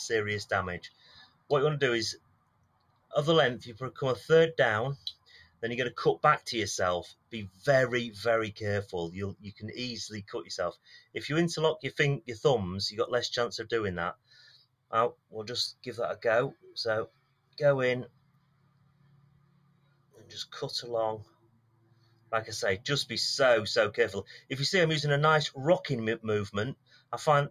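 A speech-oriented noise suppressor has been left running on material that is not speech. It treats sustained tones, ambience and decaying tails as noise and pulls them down, so the gain swings by around 20 dB through the whole clip. Onsets pass largely intact while anything held or fading sinks underneath them, which gives the audio a pumping, thinned-out character. The damage appears as sound cut by the noise suppressor in eight places: 0.86–3.13 s, 4.97–5.62 s, 7.13–7.64 s, 9.35–9.62 s, 10.75–11.15 s, 14.15–20.32 s, 21.24–22.32 s and 26.74–27.12 s. Within each span the attenuated portions drop by about 16 to 18 dB at their deepest. The longest stretch, 14.15–20.32 s, has roughly four seconds of reduced level in total. Several of the shorter spans lose only a few hundred milliseconds, where a sustain or decay is cut short as the suppressor clamps down.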